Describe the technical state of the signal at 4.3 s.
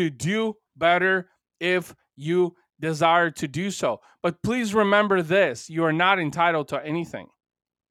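At 4.3 s the speech signal is intact, with no audible technical fault at that moment.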